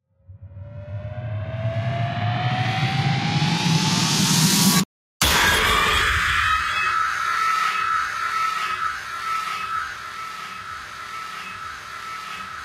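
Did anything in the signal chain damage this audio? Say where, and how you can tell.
Yes. In call processing, a speech noise suppressor left on throughout treats these sounds as noise, so level swings by about 10 dB as sustained parts and tails sink.

The noise suppressor cuts the sound from 8.91 s to the end, dropping it by about 12 dB as steady and decaying content is judged noise and pulled down.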